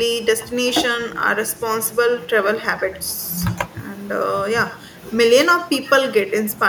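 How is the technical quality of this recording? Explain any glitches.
The recording is compromised throughout by echo with no canceller. The far end's loudspeaker feeds back into its microphone uncorrected, so every phrase returns about a tenth of a second later as a thinner copy, about 18 dB down. Unlike ordinary room reverberation, it arrives as a distinct delayed repeat rather than a smooth decaying tail.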